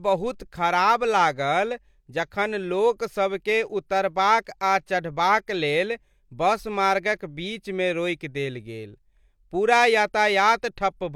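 No technical faults can be heard anywhere in the recording.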